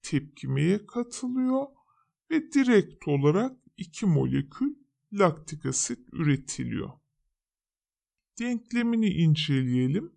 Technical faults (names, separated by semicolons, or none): wrong sample rate